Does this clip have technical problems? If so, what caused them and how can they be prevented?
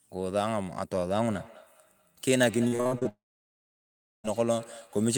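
Yes. From 1.23 s to the end, the clip has feedback echo between two devices. Two devices in the same room were on the call, and one played back what the other's microphone sent. That microphone picked the playback up again, and no echo canceller was handling the other device's output. Each stretch of speech returns roughly a fifth of a second later, about 19 dB below the speech at its loudest, thinner and ringing. To prevent it, mute the speaker or microphone on all but one device in a shared room.

From 2.67 s to 3.07 s there is repeated packet loss, heard as robotic sound. Packets failed to arrive on time over and over. The receiver covered each hole by extending the last sound, and the next hole came soon after. The pattern points to around six separate gaps, the longest about 41 ms, making up roughly half of that stretch. The speech turns choppy, with pieces missing. A steadier connection, such as wired instead of congested Wi-Fi, or a larger jitter buffer would prevent this.

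At 3.09 s the sound continues as a short fading buzz and then goes almost completely silent until 4.26 s, when it resumes with about 1.2 s of material gone. The likely cause is a long network dropout, where nothing reached the receiver for over a second. The receiver briefly carried the last sound forward and then had nothing left to play. A more reliable network link, or a fallback connection that takes over when the main one stalls, would prevent this.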